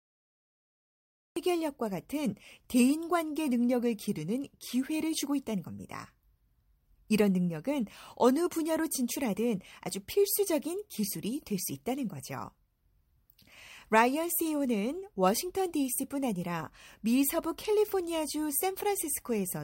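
For the first 1.36 s there is only digital silence, and then the speech enters abruptly partway through a sound. This is a cut-off start: capture began late, so the opening of the utterance was never recorded and there is no natural attack or onset. On a waveform the trace sits flat and silent before jumping straight into the speech at 1.36 s. A spectrogram shows a blank region ending in a sharp vertical edge.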